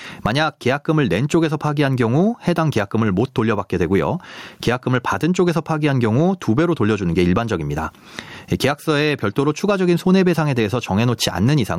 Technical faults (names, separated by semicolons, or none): gain pumping